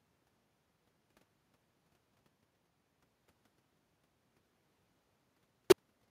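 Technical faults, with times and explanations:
Throughout: echo with no canceller. The far end is playing the call through a loudspeaker, its microphone is picking that playback up again, and no echo canceller is removing it, so the talker's own speech is sent back across the network. Each phrase returns roughly 300 ms later as a faint copy about 26 dB below the original, thinner, trailing just behind the speech.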